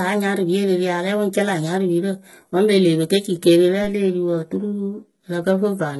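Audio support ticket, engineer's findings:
HE-AAC compression throughout the speech: heavy codec damage, likely HE-AAC at a very low bitrate, consistent with about 16 kbps. Treble is rebuilt from copied lower bands, so s sounds come out gritty and lispy. Spectrogram: hard ceiling at 11.8 kHz, and the upper band shows blocky, repeated patterns that don't line up with the harmonics below the crossover.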